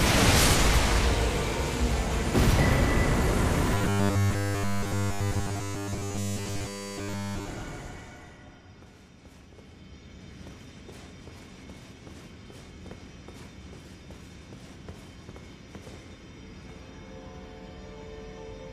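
Robotic sound from repeated short buffers, 3.75 to 7.48 s: a rigid 100 Hz metallic buzz replaces essentially everything, likely from a roughly 10 ms buffer looping while new audio stalled.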